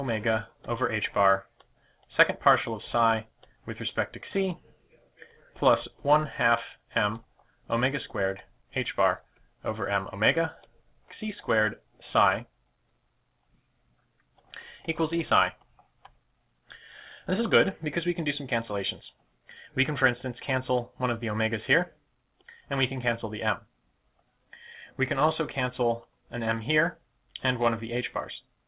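Nothing goes wrong anywhere in this audio; it simply has the narrow call-line sound of a path with nothing above 4 kHz, which fits G.711 mu-law at 64 kbps.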